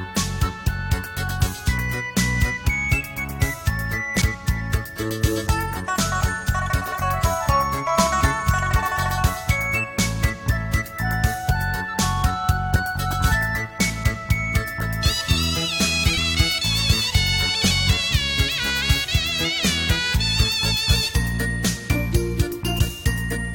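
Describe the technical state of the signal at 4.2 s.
Compressed frames skipped at 4.21 s: the decoder never plays a short run of compressed frames, either because they are absent from the file or because it rejected them as damaged. The audio jumps forward by about seven frames of 23.2 ms each, so roughly a fifth of a second of material is simply missing.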